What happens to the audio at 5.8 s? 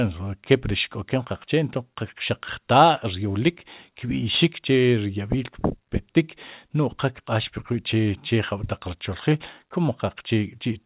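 Nothing goes wrong at 5.8 s: the speech carries straight through that moment, with only the narrow, telephone-band character of the mu-law G.711 coding that runs through the whole clip.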